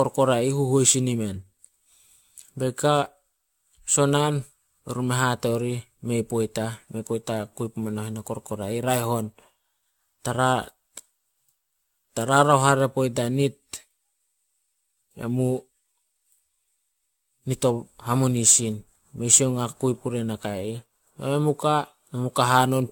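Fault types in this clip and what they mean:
generation loss: Swirly, hollow, smeared speech with blurred attacks and nothing above 17.1 kHz, likely from about five repeated AAC-LC encodes near 96 kbit/s.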